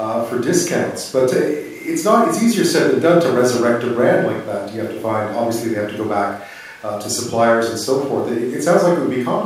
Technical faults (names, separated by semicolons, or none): none